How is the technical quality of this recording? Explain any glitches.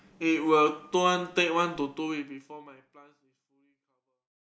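No glitches can be heard in this speech recording. The level fades out smoothly from around two seconds to the end of the clip, with no click or hard edge.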